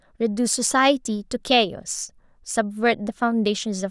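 Speech, with no technical fault audible anywhere in the recording.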